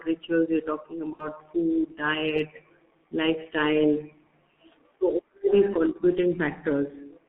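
Throughout, the speech carries heavy G.723.1 codec damage: a 6.3 kbit/s low-rate coder confined to roughly 200 Hz to 3.5 kHz, sounding muffled and hoarse, with a spectrogram empty above 3.5 kHz.

From 1.13 to 1.28 s, VoIP packet loss concealed by the speech codec replaces about 60 ms, which fits two lost frames, with a fading extrapolation of the last sound. It shows as smeared, stretched energy and a decaying waveform envelope.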